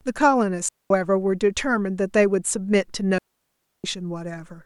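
Digital wireless dropout at 0.69 s and 3.18 s: the receiver lost too much data and muted with a quick fade, leaving clean near-silent holes of about 220 ms and 660 ms, without noise bursts.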